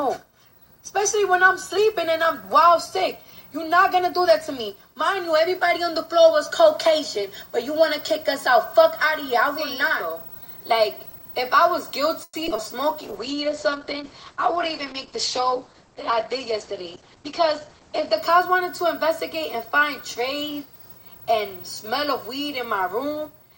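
From 12.23 to 12.60 s there's repeated packet loss: four gaps, the longest 100 ms, patched by stretching the last sound, so about 41% is concealed and it turns choppy and robotic.

At 13.03 s a call bitrate drop hits, from 64 to 10 kbps, with bandwidth falling from 20 kHz to 8 kHz. It sounds rough and muffled until 18.23 s.

Inside that, 13.32 to 13.79 s is a jitter buffer slow-down. It adds 50 ms by repeating pitch periods, so the sound runs at 91% speed, drawn out but at the same pitch.

Then 14.94 to 17.17 s is a jitter buffer speed-up. Cutting about a tenth of a second pushes it to 105% speed at unchanged pitch, so it feels slightly hurried.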